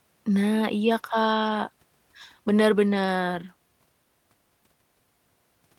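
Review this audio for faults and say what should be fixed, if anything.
Nothing stood out on listening to this speech recording, so there is nothing here that needs fixing.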